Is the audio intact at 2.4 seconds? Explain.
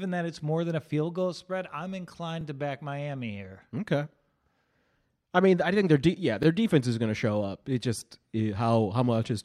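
No. At 2.41 to 2.43 s, between "field goal spread I'm" and "to back", there is a brief click-like stutter as a 20 ms sliver plays twice. This comes from overlapping chunks: each 4-second chunk begins before the previous one ends.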